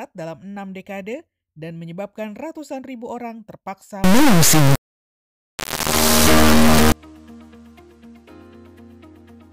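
From 4.04 s to 6.92 s the audio turns into an integer-read-as-float fault: 32-bit integer samples are being interpreted as 32-bit floats, so each value lands either near zero or far past full scale. The result is a harsh, extremely loud square-wave buzz. On the waveform that stretch jumps between near zero and a flat clipped level, and the spectrogram fills with dense broadband energy and stacked odd harmonics.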